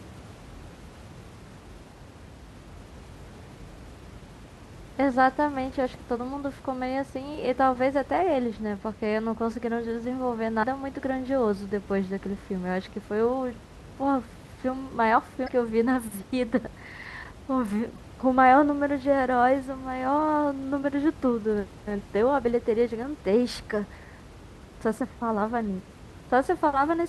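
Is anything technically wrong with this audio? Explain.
Yes. The speech has damaged data in a compressed stream at four points: 2.01 to 2.04 s, 10.60 to 10.64 s, 15.45 to 15.49 s and 17.94 to 17.98 s. Each is a brief glitch lasting roughly 35 to 40 ms. Corrupted bytes made the decoder misread those frames and lose sync, so it hunted for the next valid header. The room noise, about 20 dB below the speech, plays no part in these events.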